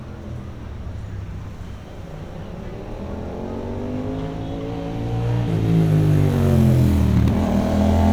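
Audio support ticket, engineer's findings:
Listened to the whole recording of sounds and found nothing amiss; no defects to log on this one.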